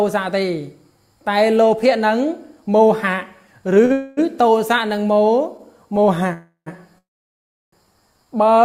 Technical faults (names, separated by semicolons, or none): short stall from a late packet; call audio freeze